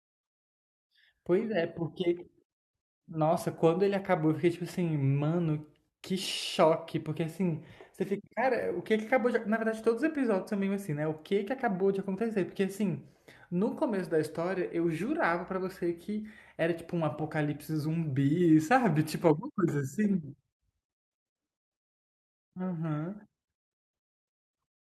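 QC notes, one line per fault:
No faults heard anywhere in this speech recording.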